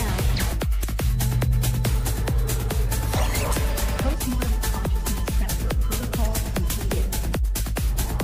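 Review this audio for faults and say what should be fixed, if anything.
At 0.83 s there are compressed frames skipped: the sound jumps forward by around 50 ms, which fits a couple of frames about 26 ms long that were either missing from the file or rejected by the decoder as damaged. The skipped material is simply absent. To prevent it, verify the file's integrity after encoding and transfer, and re-encode or re-copy from the source if frames are missing or corrupted.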